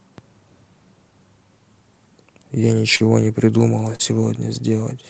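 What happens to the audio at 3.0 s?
Between 2.95 and 3.02 s there is a short concealed packet loss: about 40 ms of audio arrived too late for the decoder, and the receiver extrapolated the preceding sound to cover the gap before crossfading back. It comes through as a brief smeared, wobbling blip.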